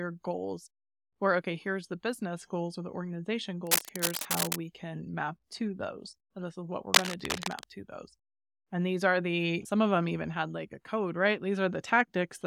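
Cable scratch noise hits from 3.65 to 4.56 s and again from 6.93 to 7.64 s. Dense, uneven rustling sits roughly level with the speech. A worn connector being moved is the likely cause.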